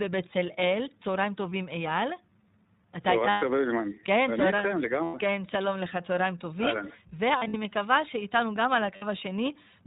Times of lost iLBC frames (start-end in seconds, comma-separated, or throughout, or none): 1.50-1.52, 3.30-3.43, 5.04-5.15, 7.38-7.55, 8.96-9.04